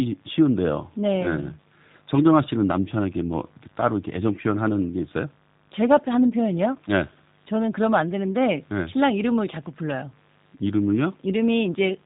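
G.729 codec damage runs from start to finish, plainly audible in the speech. Each 10 ms frame is rebuilt from a vocal tract filter, pitch predictor and sparse pulses, which fits an 8 kbit/s G.729A stream, leaving a rough, synthetic edge and nothing above 3.8 kHz.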